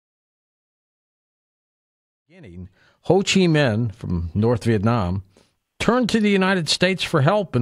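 Nothing goes wrong technically in this bit of speech: the level just eases up in a smooth fade-in from around 2 seconds and settles at full strength by 3.29 s, with no click or hard edge along the way.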